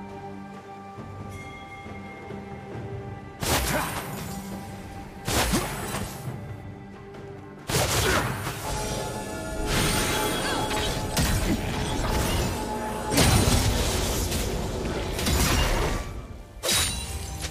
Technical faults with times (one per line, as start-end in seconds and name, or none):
9.97-10.19 loud pop